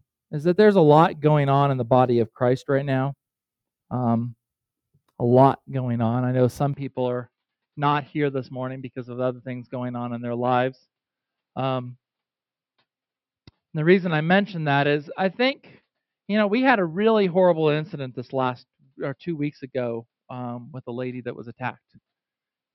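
Input switched to a poorer device at 6.74 s, lasting to the end of the clip. With no gap at the change, the sound abruptly narrows in bandwidth, turning duller and boxier, drops by about 5 dB, and gains a faint new background noise sitting well below the signal. The likely cause is the recording input changing to a different, narrower-band microphone or a headset's call profile, which brings its own bandwidth limit, tone, gain and noise floor.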